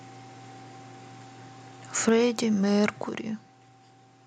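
At 2.09 s the speech and the background behind it drop together by about 4 dB in one step, then at 3.09 s by about 6 dB more. That's a microphone volume stepped down, likely the call software trimming the input level twice.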